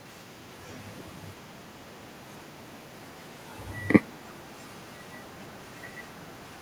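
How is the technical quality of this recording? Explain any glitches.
One fault runs through the recording. An echo leak lasts from 0.06 s to the end. A very faint copy of the speech trails 328 ms behind, likely loudspeaker pickup that an echo canceller missed.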